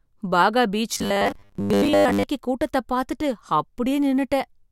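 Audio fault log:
0.94–2.23 s, robotic sound from repeated short buffers: the speech becomes a rigid, metallic buzz near 100 Hz, loosely following the syllables until "கூட்டத்தை பார்த்துட்டு". Likely cause: audio arriving too seldom, so a 10 ms chunk loops through most of this stretch, skipping real audio and imposing that fixed pitch.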